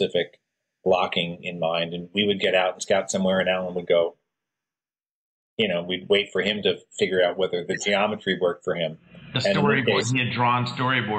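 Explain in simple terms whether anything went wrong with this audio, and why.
Nothing went wrong that I could hear: listening carefully, no glitch, dropout or distortion stood out anywhere in the recording.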